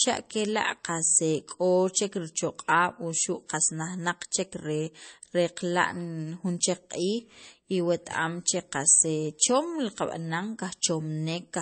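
From start to finish the speech sounds plainly watery and swirly, with a hard ceiling at 8.4 kHz. That's likely MP3 compression at a starved bitrate, something like 32 kbps, where the encoder drops the treble and flickers weak frequency lines on and off frame to frame.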